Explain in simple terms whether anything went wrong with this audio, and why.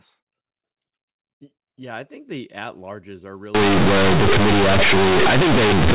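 Yes, something goes wrong partway through. From 3.55 s to the end, the speech turns into a harsh, very loud buzz, with heavy noise filling what should be quiet gaps. This is companded audio read as linear. The sound was stored in mu-law, the telephone format that squeezes loudness onto a curved scale, but this part was played back as plain 8-bit samples without undoing that curve. Soft sounds come out as loud as strong ones, and the waveform is bent badly out of shape.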